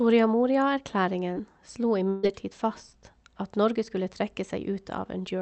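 At 1.33 to 1.37 s there is a short concealed packet loss: about 20 ms of the speech arrived too late, and the decoder patched it by extending the preceding sound, leaving a brief smear or wobble rather than an audible gap. Its brevity separates it from the later fault.

From 2.09 to 2.25 s a burst of packet loss removes about 140 ms. The receiver keeps continuing the last sound and lets it decay, so a held buzz or fading hiss replaces real speech. The audio never drops to silence before resuming further on, with that stretch missing. Throughout, the Opus call path limits the audio to about 8 kHz.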